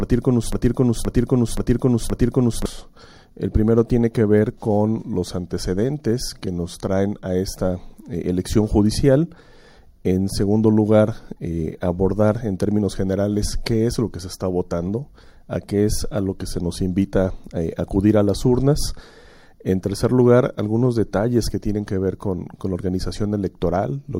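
From the very start until 2.66 s, a broken-record loop: a 0.52 s fragment repeats exactly, back to back, four times, likely from a stalled stream.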